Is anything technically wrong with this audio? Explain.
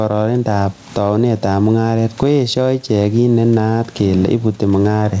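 Yes, there's gain pumping running through the whole clip. The room noise sits about 39 dB below the speech. The level swings by something like 15 dB. The likely cause is the mic gain set far too high, with a fast limiter or compressor clamping down on every loud syllable. That squeezes loud and soft parts together, so the speech sounds squashed.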